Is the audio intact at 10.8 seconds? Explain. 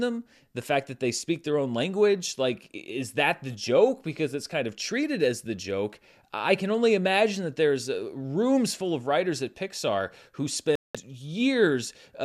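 No. At 10.8 seconds the speech falls inside a digital broadcast dropout running from 10.75 to 10.95 s. The receiver stopped getting valid frames and muted until clean ones returned, so about 192 ms of programme is simply gone, which fits roughly eight lost frames. It sounds like an abrupt hole in the speech. On a waveform it is a flat line, and on a spectrogram it is a clean, empty vertical gap across all frequencies.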